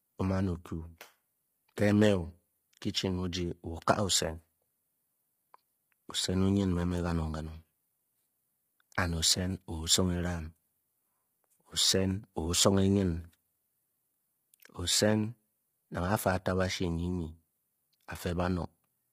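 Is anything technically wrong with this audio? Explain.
Yes. Throughout the speech, the voice sounds rough and grainy, with noise filling the gaps between pitch harmonics and nothing above 15.6 kHz. This is likely heavy low-delay AAC compression (AAC-ELD): short frames resolve harmonics poorly, and the damage fits a bitrate near 24 kbps.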